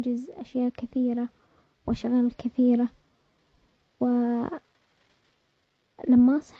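Speech recording with no audible technical faults.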